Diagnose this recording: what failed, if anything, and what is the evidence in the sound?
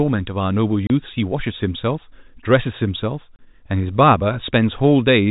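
The speech cuts to dead silence for 30 ms at 0.87 s and again at 3.36 s, each hole with hard edges. This is packet loss filled with silence on the network: each gap fits one lost 30 ms packet of the G.711 telephone stream, replaced with silence.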